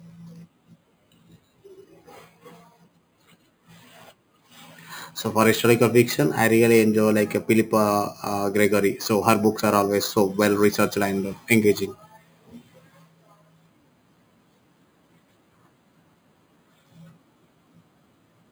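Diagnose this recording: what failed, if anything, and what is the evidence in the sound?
Sample-rate conversion failed: the audio was raised to 44.1 kHz from about 11 kHz by repeating each sample with no smoothing filter, giving imaging from sample-and-hold upsampling throughout. A bright metallic fizz tracks the speech level, about 18 dB below it. On a spectrogram, mirrored harmonics fill roughly 5.5 to 11 kHz and repeat toward higher multiples, the lowest copy sliding opposite to the pitch. The zoomed waveform shows four-sample staircase steps.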